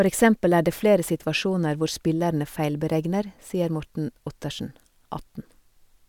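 No technical faults can be heard anywhere in the speech recording. Nothing in the audio calls for a time marker or a fault description.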